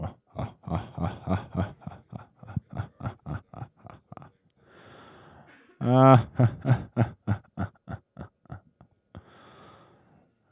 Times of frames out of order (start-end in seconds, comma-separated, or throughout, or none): none